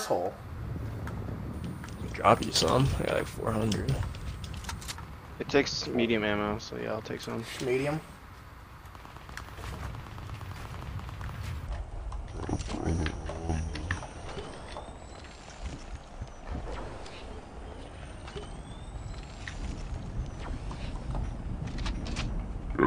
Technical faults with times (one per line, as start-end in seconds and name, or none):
11.67-22.86 section at the wrong speed